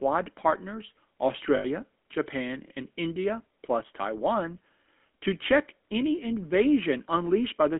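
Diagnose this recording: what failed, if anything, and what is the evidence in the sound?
Codec stage. GSM full-rate codec damage is plainly audible across the whole clip. The speech sits in a 200 Hz to 3.5 kHz band and carries a buzzy, gravelly roughness. The coder rebuilds the voice from a vocal-tract model driven by sparse pulses. That fits a 13 kbps full-rate link.

Network stage. Lost GSM frames appear from 1.56 to 1.65 s. For about 80 ms the sound freezes into a rough, metallic ring. The decoder repeated the last good frame's settings. This fits four missing 20 ms frames.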